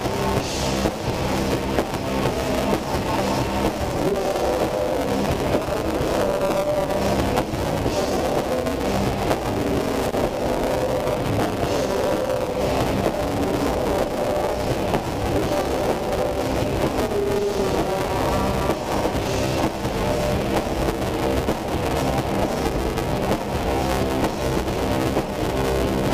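You've got buffer tearing running through the whole clip: a steady robotic buzz at 200 Hz, present whenever there's signal, which fits a 5 ms buffer period. The writer and the hardware reader have drifted, so something like two-fifths of each period replays audio about 10 ms old, with hard joins either side. On top of that there's a short loose connector crackle from 10.03 to 10.13 s, an irregular scratchy burst where a dodgy contact is making and breaking and chopping up the signal.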